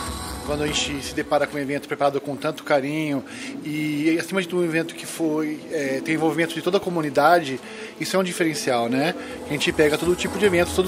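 From 6.01 to 8.13 s there's GSM phone buzz: a nearby 2G handset on a call, bursting about 217 times a second, gets its radio pulses rectified in the audio circuitry. You hear a steady, raspy 217 Hz buzz full of harmonics, sitting about 24 dB under the signal.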